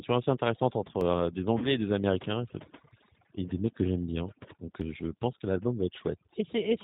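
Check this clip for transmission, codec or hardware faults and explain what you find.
Four faults are present in this speech clip. Two run throughout and two appear at specific moments.

Overdone noise removal affects the whole clip. A noise reduction stage was set far too aggressively. Any frequency band that came close to its noise estimate was pushed down hard or switched off, and the quieter parts of the speech went with them. The background sinks to near silence dotted with twinkling specks.

The G.729 codec also runs throughout, and its damage is plainly audible. This is the G.729A variant at 8 kbit/s. It rebuilds speech from a vocal tract filter, a pitch predictor and a few pulses per frame. It does not carry the original waveform. Nothing above 4 kHz survives, so the speech is band-limited and muffled at the top. It also has a rough, synthetic edge.

Audio missing between chunks shows up as three skips, at 1.01 s, 2.91 s and 4.81 s. 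They are spaced about 1.9 s apart. Each skip drops roughly a tenth of a second. The sound on either side is joined directly, with no silence between. The regular spacing likely comes from a recorder or processor working in 2-second chunks and losing a short piece at each handover.

VoIP packet loss concealed by the speech codec occurs from 1.58 s to 1.72 s. About 40 ms of audio was lost, which fits four missing 10 ms frames. The decoder filled the hole by extending its last pitch and filter settings while lowering the gain. This produces a stretched sound that fades out. Each frame builds on the one before, so the speech stays weak or distorted a little past the gap.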